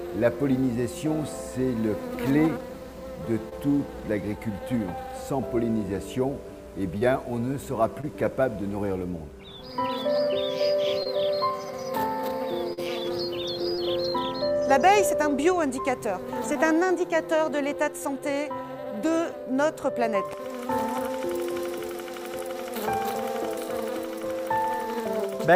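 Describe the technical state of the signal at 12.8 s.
Short concealed packet loss runs from 12.73 to 12.79 s. About 40 ms never arrived. The decoder extrapolated the preceding sound, heard as a brief smear.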